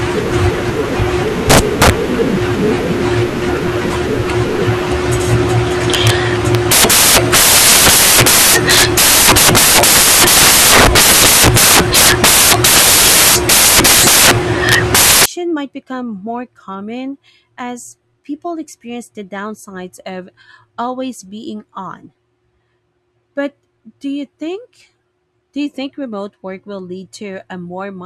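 A speech clip in which, from 0.0 to 15.26 s, the samples are built from the wrong bytes: misordered or misaligned bytes push the rapidly changing low bits into the top of each value, giving loud white noise.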